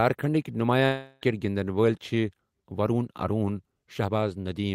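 A long network dropout runs from 0.85 to 1.24 s in this speech. At 0.85 s the last sound is stretched into a buzzy, hissing continuation that fades over about 0.36 s but never drops to full silence. The speech resumes at 1.24 s with that stretch missing. The likely cause is a break in packet delivery. The receiver's concealment filled the gap by extending what it last received instead of the lost audio.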